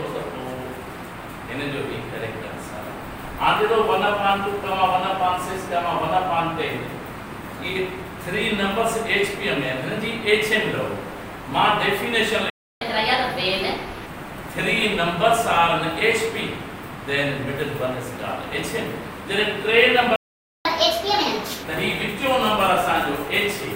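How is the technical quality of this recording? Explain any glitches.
Two glitches stand out, each a dropout followed by a fast, sharp-sounding stretch.

Playback stalls hit at 12.50 s for about 0.31 s and at 20.16 s for about 0.49 s. The sound just cuts to silence mid-flow, then resumes. That's most likely the player running dry on data, or its thread getting blocked, until it recovers.

Right after each gap there's catch-up at higher speed. From 12.81 to 14.06 s it runs at 1.25x, about four semitones sharp, and from 20.65 to 21.63 s at 1.5x, roughly seven semitones up. The player is resampling its backlog to make up lost time.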